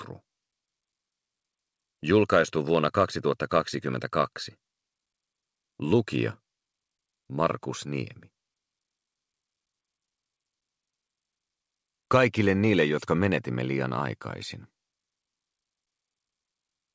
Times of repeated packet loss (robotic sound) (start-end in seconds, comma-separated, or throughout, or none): none